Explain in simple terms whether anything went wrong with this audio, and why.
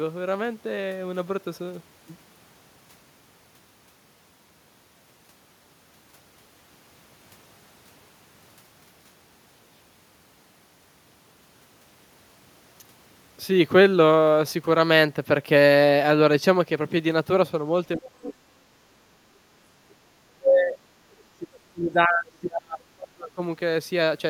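Speech suppressed in double talk, from 17.97 to 18.58 s, 19.53 to 20.77 s and 21.34 to 23.41 s: the talker's voice sinks sharply or breaks up. Likely both sides spoke at once, and the echo canceller turned everything down rather than separating them.

Other side's voice leaking through, at 18.24 to 18.29 s and 21.11 to 21.23 s: brief faint scraps of a second voice slip in, the later one very quiet. Likely the loudspeaker's sound reached the microphone and wasn't fully removed.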